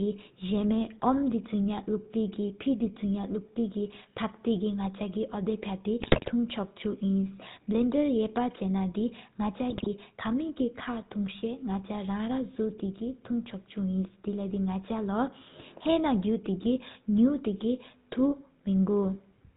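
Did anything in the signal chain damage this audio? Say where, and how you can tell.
Yes. GSM full-rate codec damage runs through the whole clip at the codec stage. Nothing reaches above 4 kHz, and the speech has a buzzy, gravelly roughness, consistent with 13 kbps full rate. The excitation is rebuilt from regularly spaced pulses, keeping only every third sample.

GSM bit errors hit the radio link at 6.0 to 6.31 s and 9.7 to 9.87 s. The speech breaks into squawks, pops and gargling. Corrupted filter, pitch and gain values distort the spectrum or level frame by frame, which points to error rates of roughly 4 to 5 percent.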